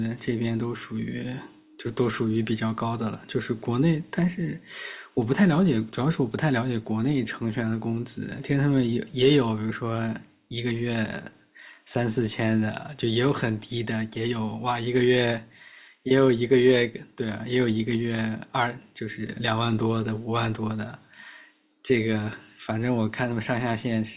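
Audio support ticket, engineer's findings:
No fault found on listening; speech audio reproduces without any audible defect attributable to capture, transport or playback components.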